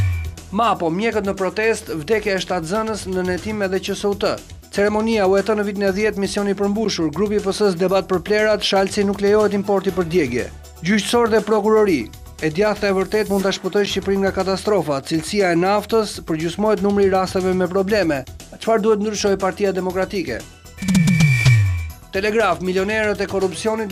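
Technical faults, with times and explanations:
6.85 s and 13.86 s, block of digital silence: output drops out for about 11 ms with no fade, heard as a tick or dip, consistent with an unfilled 512-sample buffer.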